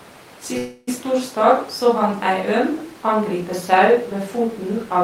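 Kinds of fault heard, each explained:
Call audio freeze: from 0.57 to 0.89 s the speech stops advancing and the last sound is drawn out as a fading buzz for about 300 ms, with no drop to silence. The likely cause is packets held up in transit, so the jitter buffer ran dry and the receiver padded the wait. When the speech resumes it picks up exactly where it paused, so nothing is lost but everything after runs roughly 300 ms later.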